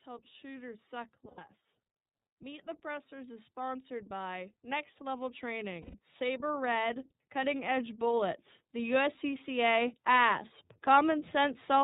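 Rough, slightly synthetic speech with nothing above 4 kHz runs throughout. This is iLBC codec damage: the narrowband codec codes each frame's excitation independently, and the sound fits its 30 ms-frame mode at about 13.33 kbps. Right after "helps shooters suck", from 1.28 to 1.39 s, the speech turns into a brief held, buzzy vowel. The same thing happens again from 5.81 to 5.97 s. These are lost iLBC frames. The decoder repeats the last pitch cycle mixed with noise to cover the gaps, which fit about 90 ms and 120 ms of missing 30 ms frames. Clear speech returns almost immediately afterwards. From 2.38 to 10.46 s, voice and background swell together by about 14 dB. This is automatic gain rising: the gain control judged the input too quiet and slowly raised its gain.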